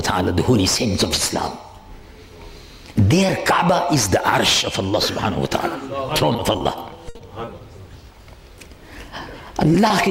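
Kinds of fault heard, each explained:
Repeated packet loss (robotic sound): packets kept going missing between 6.33 and 6.62 s, four short holes of up to 20 ms each, every one patched by extending the previous sound. About a quarter of that stretch is filled in, so it turns choppy, with roughly 60 ms of audio gone.
Burst of packet loss: a run of packets arrived too late to play from 7.09 to 7.17 s, while the delay jumped by 40 ms. The receiver carried the last sound forward for about 60 ms and faded it, then resumed slightly further on, skipping roughly 20 ms.
Short concealed packet loss: right after that burst, at 7.17 to 7.21 s, about 20 ms never reached the decoder in time. It was covered by a continuation of the preceding sound and blended back, heard as a brief smear where that sliver of audio is simply missing.
Short stall from a late packet: at 7.45 s and again at 9.88 s the jitter buffer ran dry waiting for a packet delayed about 20 ms. 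The last sound was stretched for about 20 ms until it arrived, so nothing is lost, but a moment is held slightly too long.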